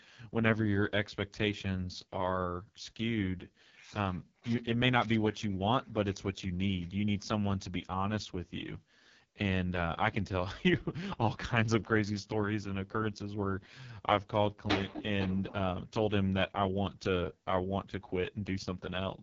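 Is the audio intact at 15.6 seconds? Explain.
No. At 15.6 seconds, as across the whole clip, the speech carries heavy AMR wideband (HD Voice) codec damage. The sound is rough and raspy, which fits the codec's lowest rate, around 6.6 kbit/s, where the pulse-driven vocal tract model has too few bits to follow the voice. On a spectrogram, energy stops sharply near 7.4 kHz, the upper band looks like smeared noise rather than harmonics, and harmonic detail is blurred.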